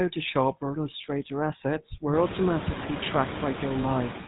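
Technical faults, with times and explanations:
Throughout: noise suppressor artifacts. Background noise is pulled down only about 3 dB frame by frame, so it dips between phrases and fluffs underneath them.
Throughout: GSM full-rate codec. Pulse-excited vocal-tract modelling at a rate that fits 13 kbps gives the speech a plainly audible buzzy, gravelly roughness, with nothing above 4 kHz.
3.82 to 3.86 s: lost GSM frame. A 20 ms gap is filled by repeating the last good frame's settings, heard as a brief rough, metallic ring.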